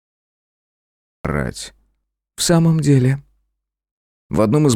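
For the first 1.25 s there is only digital silence, then a cut-off start at 1.25 s, where the capture evidently began late and the sound enters mid-event. Unlike a slow fade-in or a gate opening, there is no attack or ramp at all.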